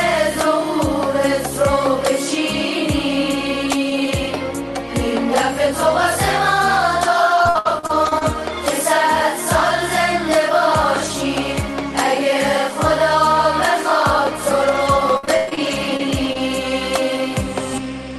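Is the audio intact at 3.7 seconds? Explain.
Yes, the audio is intact at 3.7 seconds, with nothing dropped, clipped or distorted at that moment.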